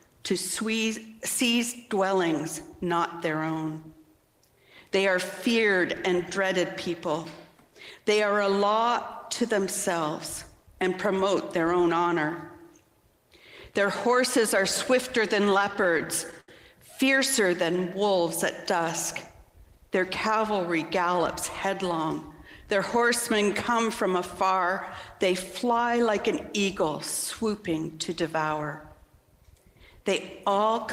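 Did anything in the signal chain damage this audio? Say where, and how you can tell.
Yes. Repeated stalls (stutter) at the network stage, 15.28–16.49 s: eleven brief hold-ups, the longest 76 ms, where the jitter buffer ran dry and the receiver stretched the last sound. Nothing drops out, unlike packet loss. The sound just drags.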